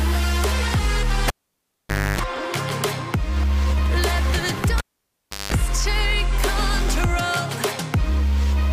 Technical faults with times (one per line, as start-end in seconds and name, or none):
1.28-2.19 cable pulled and plugged in
4.78-5.53 cable pulled and plugged in